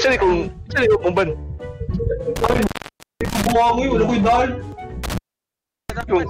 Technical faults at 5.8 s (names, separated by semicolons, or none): intermittent contact